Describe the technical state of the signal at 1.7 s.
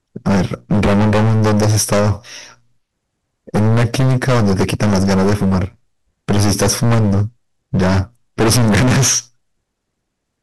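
Hard clipping is present at 1.7 s, as it is across the whole recording. The speech was pushed roughly 23 dB beyond what the signal path could carry, so its peaks are sliced flat, with close to a third of the samples pinned at the limit. Those squared-off tops generate strong high harmonics, and at this level of overload the result is a harsh, buzzing fuzz on every loud stretch of the voice rather than occasional crackle.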